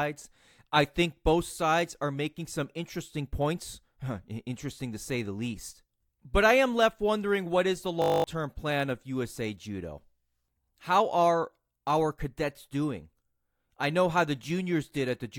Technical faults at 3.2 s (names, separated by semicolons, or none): none